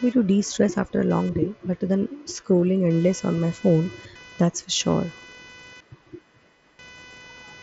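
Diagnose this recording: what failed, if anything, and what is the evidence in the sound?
Computer activity noise in the analogue wiring: processor load shifts the shared ground, adding a buzz pulsing around 500 Hz, roughly 25 dB below the speech.

Concealed Bluetooth headset packet loss on the wireless link: lost packets from 2.56 to 2.62 s and at 4.91 s were filled with repeated waveform, leaving brief patches.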